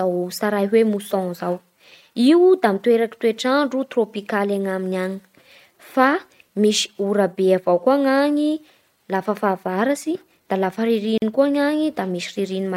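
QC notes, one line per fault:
11.18–11.22 s, gap at a join of encoded pieces: after "lafa fahavaratsy da lafa" the speech drops into a 42 ms silence, then resumes with "kosa ny" exactly where it left off. Two separately encoded pieces were joined without trimming, so one piece's padded final frame and the next piece's start-up delay both remain. On a waveform this is a flat gap with softened edges. On a spectrogram it is a blank vertical band, its borders slightly smeared by the codec.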